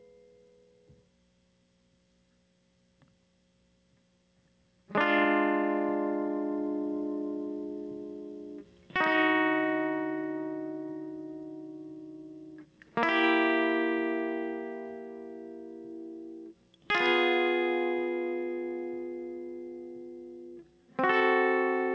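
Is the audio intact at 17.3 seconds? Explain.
No. At 17.3 s the music shows gain pumping, present throughout: the level swings around 10 dB, squashing peaks, likely from excessive gain hitting a fast limiter.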